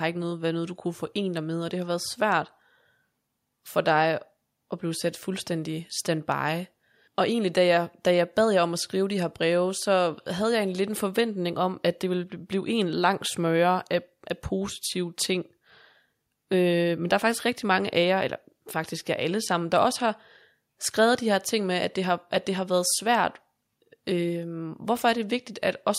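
No technical faults can be heard in this speech recording. Nothing in the audio points to a problem at any point.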